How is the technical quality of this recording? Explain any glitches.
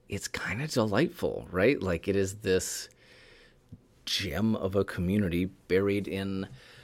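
The technical quality of this recording holds up, with no glitches to explain.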